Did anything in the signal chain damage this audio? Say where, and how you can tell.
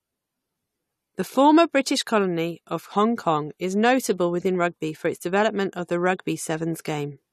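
Yes. Clock slip clicks appear at the converter or device-clocking stage: about seven faint ticks, roughly one per second, from 0.88 s to 6.98 s. The likely cause is two unsynchronised clocks differing by around 20 ppm, with one sample dropped or repeated at each slip.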